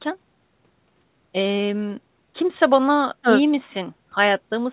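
Nothing in this speech goes wrong; it has the narrow, slightly grainy sound of an ordinary phone-style call, with nothing above about 4 kHz, which fits a standard narrowband call codec doing its usual job.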